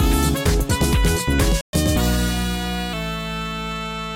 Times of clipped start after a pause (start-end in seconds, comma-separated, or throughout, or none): none